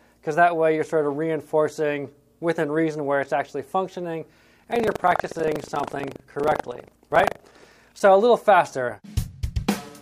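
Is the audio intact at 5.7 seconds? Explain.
No. Buffer tearing runs from 4.48 to 8.03 s. Writer and reader have slipped, so a small slice of each period replays audio about 70 ms old, producing a 25 Hz rattle.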